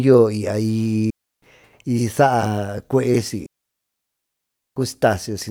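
At 1.10 s the speech drops into a clean hole of near silence lasting about 0.32 s, until 1.42 s. At 3.46 s a second, longer hole opens and runs 1.3 s, to 4.76 s. Both are digital wireless dropouts. The radio link lost too much data, so the receiver muted rather than pass on corrupt audio. Each mute fades in and out very quickly. No burst of noise or crackle comes before or after either gap.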